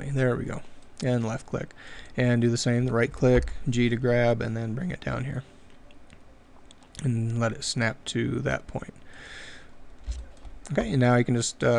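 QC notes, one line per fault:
Nothing here catches the ear as a fault, so there's nothing to log for this one.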